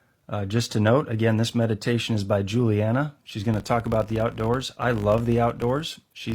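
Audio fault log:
3.54–6.35 s: filter restarted on every block. From 3.54 s to the end, a buzz at 50 Hz rides under the speech. A filter in the chain is dropping its stored state at each block boundary and beginning again from silence, so every block opens with a small transient. At 50 per second these ticks fuse into a buzz, which points to 20 ms blocks. The buzz tracks the speech's loudness, growing on stronger syllables and fading in quieter stretches.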